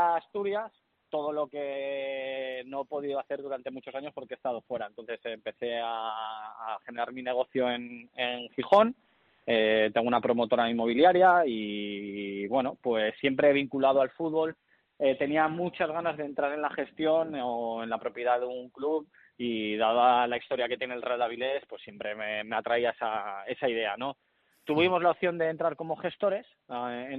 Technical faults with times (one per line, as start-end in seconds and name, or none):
none